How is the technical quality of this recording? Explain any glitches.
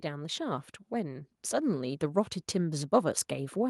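The recording has one clear fault: automatic gain rising, running from 0.05 s to the end. The automatic gain control judged the incoming level too low and kept pushing its gain upward across the whole clip, rather than settling. Because the gain acts on the entire signal, the speech and the background noise swell together, so the noise floor climbs in step with the voice and the level never holds steady.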